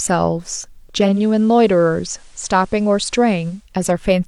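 At 1.0 s the receiver lost its digital stream and blended to the FM broadcast of the same station over 220 ms, returning at 3.7 s. During that stretch the speech drops about 2 dB and carries hiss some 35 dB down.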